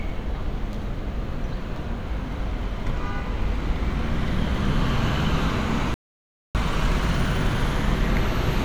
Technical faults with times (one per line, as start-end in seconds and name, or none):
5.94-6.55 audio dropout to silence